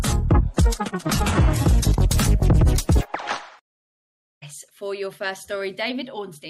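From the start to 2.0 s the sound shows an adaptive stream starting at a low bitrate. The player opened on a cheap version to begin quickly, and the smeared, watery texture and artificial-sounding treble fit an HE-AAC stream at around 16 kbit/s. At 2.0 s it jumps, with no gap, to a cleaner version consistent with AAC-LC at about 96 kbit/s. On a spectrogram, the opening shows nothing above 12.3 kHz and blotchy, patterned upper bands, then finer detail appears abruptly at 2.0 s.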